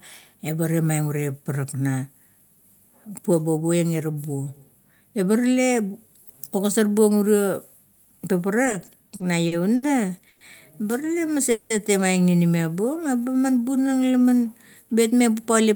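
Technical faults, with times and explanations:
8.65–9.85 s, repeated stalls (stutter): eight short gaps, longest 70 ms, about 200 ms filled in all, as late packets kept emptying the jitter buffer and the receiver stretched the last sound.
10.29–10.43 s, call audio freeze: a 120 ms hold where the last sound is continued as a fading buzz or hiss, likely from packets delayed in transit, then the audio resumes with nothing lost.
11.07–11.50 s, jitter buffer slow-down: 45 ms added by repeating single pitch periods or bits of pauses, so the speech runs at 91% speed at unchanged pitch while the buffer rebuilds its reserve.
11.51–11.72 s, call audio freeze: a 190 ms hold of continued, fading sound, likely from held-up packets, after which the audio picks up where it stopped.
12.77–14.36 s, jitter buffer slow-down: 196 ms added through repeated pitch periods or bits of pauses, slowing the speech to 88% speed at the same pitch, with drawn-out sounds.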